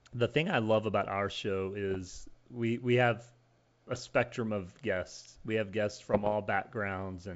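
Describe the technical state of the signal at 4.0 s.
At 4.0 s the speech is hit by bit errors on an ADPCM link, running from about 3.95 to 4.10 s, just before "of guests". Flipped bits corrupt the decoded values. Each one also knocks the decoder's step size and predictor off track, so the damage rings on briefly. The result is pops and rough, gritty bursts with quick jumps in level. The error rate sounds like around one percent. Underneath, the 64 kbit/s G.722 wideband coding carries on.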